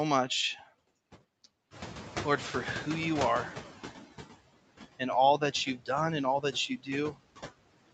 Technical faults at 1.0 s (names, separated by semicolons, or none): noise suppressor artifacts